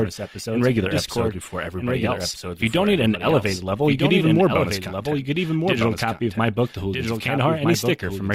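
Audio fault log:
throughout: doubled audio track. A second, full-band copy of the speech trails the original by about one and a half seconds and sits roughly 5 dB lower, with no reverberant tail or room colouring. It is likely caused by a slower second capture path or an edit holding two copies out of step. On a spectrogram, every syllable's harmonic pattern reappears, fainter, shifted right by that fixed gap. The waveform shows overlapping envelopes, and the copy starts abruptly with no fade-in.
0.0–4.0 s: adaptive stream starting at a low bitrate. For the first four seconds the treble is missing or sounds synthetic, with stronger codec artefacts. At 4.0 s the quality jumps suddenly, with no gap. This fits an Opus stream opening near 24 kbit/s to start quickly, then switching to about 64 kbit/s once the connection was measured. On a spectrogram, the upper band is empty or patchy until 4.0 s, then fills in with a sharp vertical edge.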